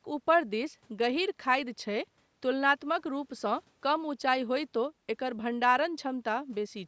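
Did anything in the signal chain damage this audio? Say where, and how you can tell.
No, nothing in the signal chain damaged this speech.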